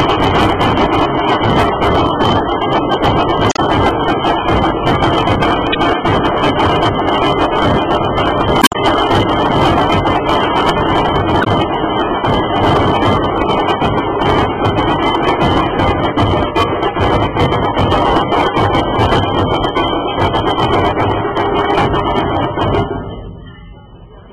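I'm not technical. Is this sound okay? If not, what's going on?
No. Four times the sound breaks into a brief chirp, squawk, click or short gap, sometimes with a skip ahead: at 3.49 to 3.59 s, 5.72 to 5.76 s, 8.59 to 8.76 s and 11.40 to 11.47 s. This is damaged data in a compressed stream. A few small pieces of the stored audio file got scrambled or lost, so the player briefly misreads them, makes a glitch, then jumps forward to where the file makes sense again.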